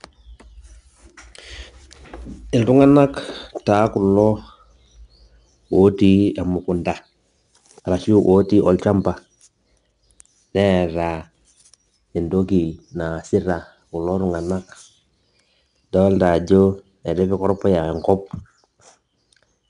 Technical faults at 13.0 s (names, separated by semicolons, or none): 4-bit ADPCM compression